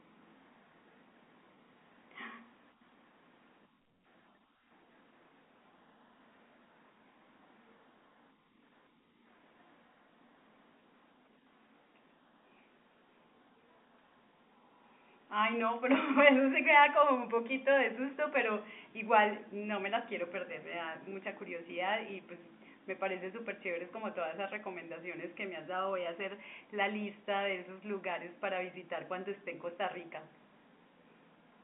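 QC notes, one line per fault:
No faults found in the speech. The audio has the narrow band of G.711 telephone coding, about 250 Hz to 3.6 kHz with nothing above 3.8 kHz, and any codec trace is faint at most.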